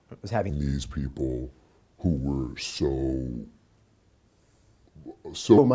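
From about 0.50 s to 5.58 s there's a wrong sample rate fault. Audio recorded at 22 kHz is being played back at 16 kHz with no conversion. Everything runs at roughly 0.73 times speed and drops about 5.5 semitones, so it comes out low, slow and dragging.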